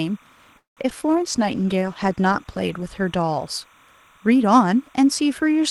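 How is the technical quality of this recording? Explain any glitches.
The recording has several audible technical faults: a constant background chirp, choppy speech early on, and a stretch of degraded, slightly dragging speech.

Timecode bleed runs throughout. A steady chirping warble sits about 30 dB below the speech, flipping between tones near 1 and 2 kHz. This fits 29.97-frame linear timecode leaking in from a neighbouring track or cable.

From 0.57 to 1.04 s there is repeated packet loss, which gives a robotic sound. The speech turns choppy and robotic across four gaps, the longest 193 ms. About half of that span is patched by stretching the previous sound.

From 1.09 to 2.94 s a call bitrate drop makes the speech rough, watery and muffled. The encoder was coding far more coarsely, which fits a fall from 32 to 14 kbps, and it cut off the high frequencies.

From 1.38 to 1.80 s, within that stretch, a jitter buffer slow-down drags the speech to 92% speed at the same pitch. 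The receiver repeated pitch periods, adding 41 ms to rebuild its reserve.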